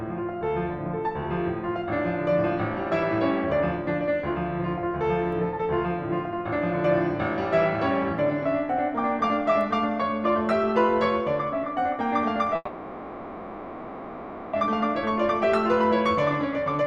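From 12.55 to 14.55 s, packets most likely stalled in transit and the jitter buffer ran dry: a call audio freeze. The receiver stretches the last sound of the music into a fading buzz for about 2 s, then resumes where it stopped, losing nothing but adding delay.

A jitter buffer speed-up follows, as the overfilled buffer trims pitch-period slices to catch up. From 14.67 to 15.52 s the music runs 4% fast, a few tens of milliseconds removed. From 16.39 to 16.86 s it rushes at 118%, losing about a tenth of a second, and the tempo lurches.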